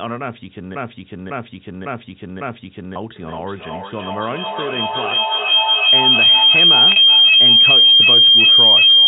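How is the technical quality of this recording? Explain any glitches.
The technical quality is poor. Three distinct faults affect this telephone-band speech recording, and a feedback howl dominates the second half.

From 0.75 to 2.96 s there is a broken-record loop. A fragment of about 0.55 s plays four times back to back, and the speech that should have filled that stretch never arrives. The likely cause is a stalled player or stream that kept resending the last chunk it held. On a waveform, the same 551 ms shape repeats as identical blocks. On a spectrogram, the same patch of harmonics and formants appears four times in a row.

From 3.16 s to the end of the clip, a feedback howl builds. A microphone is picking up a loudspeaker on the same call, and each trip around that loop adds level instead of losing it. The sound narrows to a piercing tone around 3 kHz. It peaks about 14 dB above the speech and pulses roughly every 400 ms, matching the loop's delay. 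A spectrogram shows a thick, bright horizontal line near 3 kHz that swells in regular beats. In the waveform, the envelope grows until the howl swamps the speech.

Between 6.92 and 6.96 s, during the howl, there is packet loss with pitch repetition. About 40 ms of audio went missing, which fits two lost packets. The receiver covered the gap by repeating the last pitch cycle, so the sound holds briefly with a slight buzz before normal audio resumes. A waveform shows a short run of identical periodic cycles. On a spectrogram, the harmonics freeze flat for that sliver of time.

The telephone coding itself is working as expected. Nothing appears above 4 kHz, which is consistent with a standard fixed-line G.711 channel.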